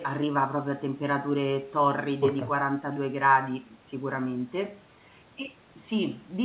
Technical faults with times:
none

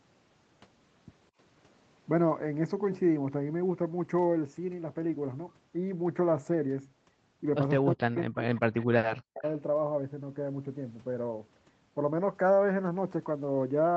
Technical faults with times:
7.80-9.44 speech suppressed in double talk
8.81-8.85 echo leak
9.38-9.50 echo leak

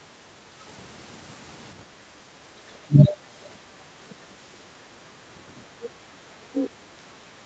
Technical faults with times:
1.87-2.35 background gated by the echo canceller
2.87-3.12 speech suppressed in double talk
2.98-3.17 other side's voice leaking through
3.44-3.49 other side's voice leaking through
5.83-5.87 other side's voice leaking through
6.53-6.70 other side's voice leaking through

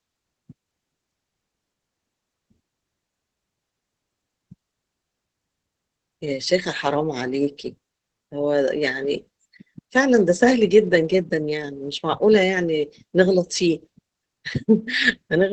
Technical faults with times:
0.00-15.53 Opus voice compression

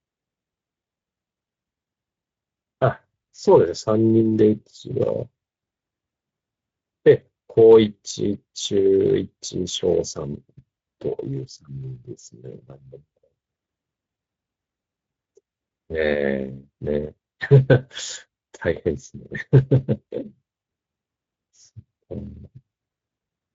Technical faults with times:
0.00-23.55 Speex codec

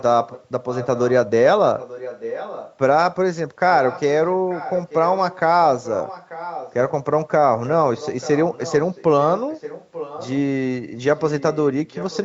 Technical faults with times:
0.00-1.12 echo leak
1.78-2.77 echo leak
3.87-5.40 echo leak
5.83-6.91 echo leak
7.66-10.41 echo leak
11.18-12.25 echo leak

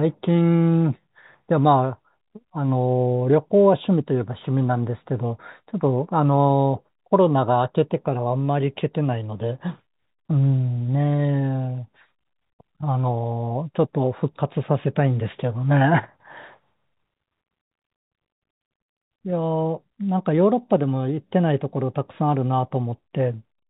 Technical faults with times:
none

